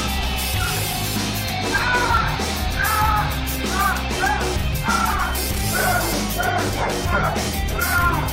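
An overlap between stream segments occurs at 2.17 s. Two adjacent segments, which fit a 2-second segment length, carried overlapping time stamps, so the player discarded roughly 6 ms of audio that was not actually duplicated. The waveform jumps across the gap, producing a brief click or skip.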